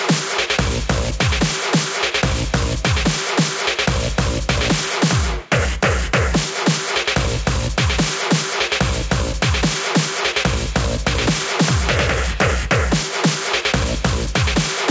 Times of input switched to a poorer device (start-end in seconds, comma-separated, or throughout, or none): none